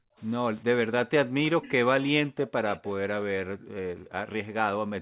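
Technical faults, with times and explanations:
0.0–0.16 s, 1.27–1.39 s, 3.34–4.35 s and 4.74–4.93 s: background gated by the echo canceller. The room sound drops out, by about 32 dB at first and about 40 dB later. The longest gap lasts about a second. The canceller clamps the microphone while the far end plays, then releases it.
1.45–1.71 s and 2.75–2.91 s: echo leak. A faint copy of the speech returns 382 ms late, roughly 20 dB below the main level. This is likely loudspeaker sound that the far end's echo canceller failed to remove and sent back.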